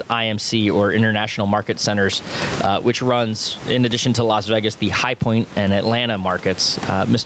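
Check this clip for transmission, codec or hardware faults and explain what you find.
One fault runs through the whole clip: gain pumping. The input gain was likely set far too high, so a fast limiter pulls the level down on every loud stretch of speech. The gain swings by around 20 dB, bringing loud and soft parts closer in level and leaving the speech squashed, on top of the call path's 8 kHz band limit.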